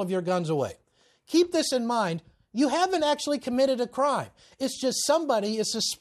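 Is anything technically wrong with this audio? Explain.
No, nothing technically wrong stands out anywhere in this speech recording.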